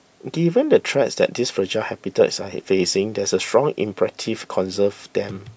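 Speech recording with no audible technical faults.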